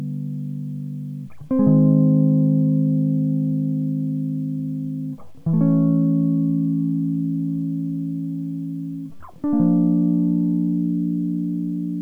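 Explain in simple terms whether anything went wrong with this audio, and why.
The music was likely stored with low bit depth without dither, around 10 bits, so quiet passages throughout turn grainy and gritty, the roughness shifting with the sound.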